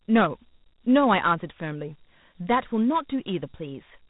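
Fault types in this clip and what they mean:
Dialogic VOX ADPCM: The 4-bit adaptive ADPCM coder only tracks the changes from sample to sample, so its coarse steps leave a plainly audible gritty hiss riding on the speech. Nothing sits above 3.8 kHz, and the sound fits a 32 kbps stream.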